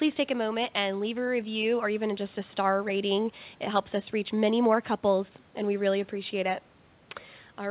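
Nothing's wrong here: it's speech carried over a call connection, and the band stopping at 4 kHz is just what you'd expect from a narrowband link, which fits G.711 A-law at 64 kbps.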